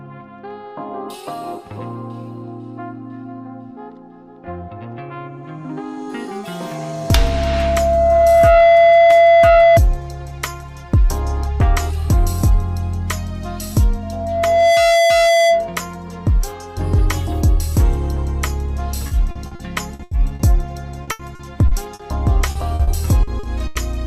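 Two faults affect the audio. Loudspeaker feedback squeal appears from 6.43 to 9.80 s and again from 14.03 to 15.80 s: a single steady 674 Hz tone swells over roughly two seconds, then under a second the second time, to stand well above the sound, about 10 dB then about 5 dB. Its fixed pitch and gradual growth mark a microphone-loudspeaker loop rather than interference. Repeated packet loss (robotic sound) follows at 19.07–20.42 s, 21.03–22.02 s and 22.51–23.78 s. Here the sound turns choppy, with gaps of up to 80 ms patched by stretching the preceding sound across roughly a quarter of each span. Unlike the squeal, there is no sustained tone.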